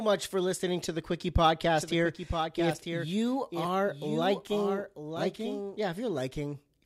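From about 1.75 s to 5.77 s the speech picks up a doubled audio track: a second full-band copy of the same speech runs roughly a second behind, a few dB quieter than the original. There's no reverb tail or room colour on it, so it sounds like a flat overlay rather than an echo, and it cuts in and out abruptly. Likely a slower second capture path or an edit leaving two copies out of step.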